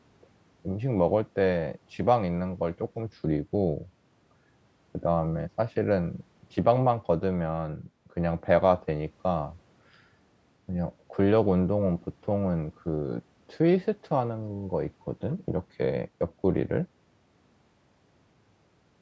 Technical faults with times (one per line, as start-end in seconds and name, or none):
none